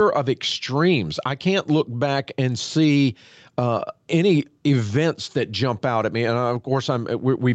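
Speech with gain pumping throughout: the level rises and falls by around 5 dB, likely from gain set too high and a fast limiter pulling it down on loud sounds. The band stops at 8 kHz from the call path.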